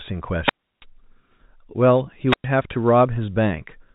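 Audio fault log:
0.42–0.85 s and 2.27–2.47 s, wireless microphone squelch dropout: hiss swells briefly, then the sound falls into near silence for 329 ms and then 106 ms before returning. The FM radio signal fades until the receiver's squelch mutes its output.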